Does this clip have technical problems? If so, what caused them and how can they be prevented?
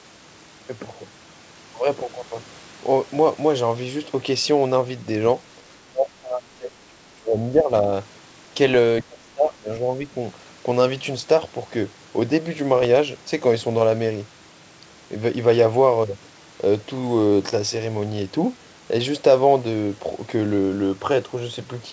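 Yes. Speech suppressed in double talk: the echo canceller likely mistook overlapping talk for loudspeaker echo and turned the near talker down along with it. From 5.86 to 7.9 s the speech sinks by about 25 dB. From 9.02 to 10.15 s it drops again, by about 20 dB. More reliable double-talk detection and gentler residual-echo suppression would prevent this.

Bit errors on an ADPCM link: flipped bits on the G.722 path upset the decoder's step size and predictor, so each error kept ringing for a few milliseconds. Short rough bursts with pops and abrupt level changes occur at 9.47 to 9.55 s and at 12.76 to 12.87 s. A cleaner transmission link with error detection and concealment would prevent this.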